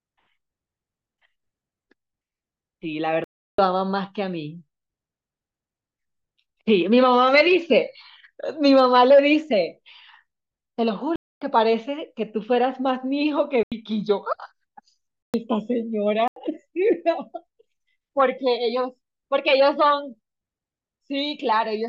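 Blocks of digital silence cut into this speech recording at 3.24–3.58 s (341 ms), 11.16–11.41 s, 13.63–13.72 s, 15.23–15.34 s and 16.28–16.36 s. The output buffer likely went unfilled and zeros were played. The 341 ms and 85 ms lengths fit 16384- and 4096-sample buffers. Compressed frames skipped at 7.40 s jump the audio ahead by about 20 ms.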